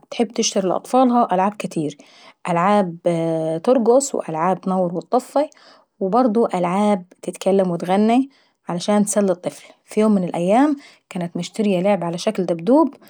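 Nothing here stands out as a technical fault: the speech runs along without any dropouts, glitches or other problems to point to.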